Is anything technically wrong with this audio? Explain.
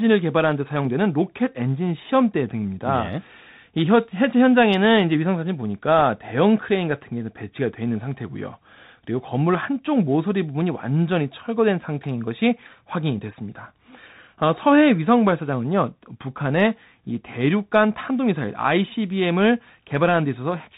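Yes. Bluetooth CVSD headset codec damage runs throughout the speech. This codec sends one bit per sample saying only up or down, with an adapting step, which fits a 64 kbps link. Nothing above 4 kHz survives, loud high sounds outrun the step and distort, s sounds turn scratchy, and a plainly audible granular hiss sits underneath.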